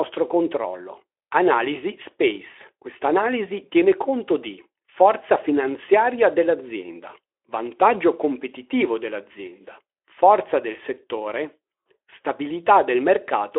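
No technical faults occur at any point in this speech clip, so there is nothing to describe in time order.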